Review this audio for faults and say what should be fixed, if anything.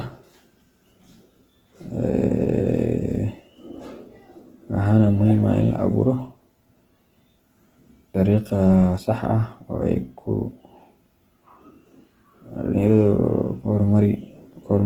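Throughout the speech, tone sounds grainy and rough, with noise-filled bands up to 20.2 kHz, likely Opus compression in music mode near 16 kbps. Prevent this by encoding at a higher Opus bitrate.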